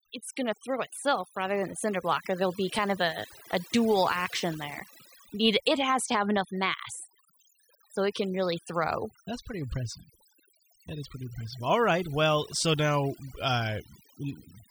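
Overdone noise removal runs throughout the speech. A noise reduction stage set too aggressively pulls individual frequency bands down or out whenever they sit near its noise estimate, so the background drops and breaks up into twinkling specks.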